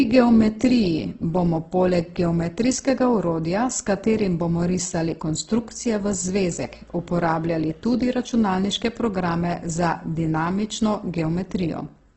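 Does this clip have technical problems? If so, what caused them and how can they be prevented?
Yes. Throughout the speech, the encoder was likely starved of bits, pointing to Opus compression in its music (CELT) mode at a rate around 12 kbps. With so little data, it cut the bandwidth so nothing survives above about 8.1 kHz and patched thin bands with folded or noise-like filler. The result is heavy damage: dull, band-limited speech with a rough, grainy texture. Encoding at a higher Opus bitrate, or in speech mode at low rates, prevents this.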